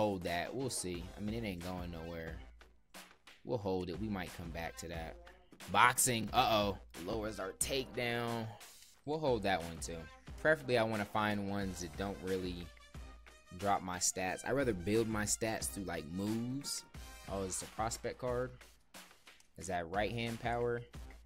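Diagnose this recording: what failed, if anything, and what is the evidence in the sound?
Chunks out of order at the driver or buffer stage: brief jumbled moments at 6.21 to 6.24 s, 7.10 to 7.14 s and 20.38 to 20.40 s. A 10 ms block was written one to three blocks late, so nothing is missing, but the order is wrong and each reshuffle leaves three hard joins.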